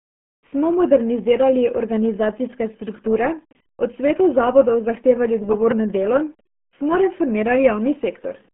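From start to finish the audio has passed through the RealAudio 14.4 codec, a low-rate dial-up speech coder whose heavy squeezing fits roughly 8 kbit/s. The coder keeps only a narrow telephone-like band, about 150 Hz to 3.5 kHz, and nothing survives above 3.8 kHz. The speech therefore sounds muffled and boxy, with no sibilance or air, and the coarse coding leaves a gargly, bubbling texture on every syllable.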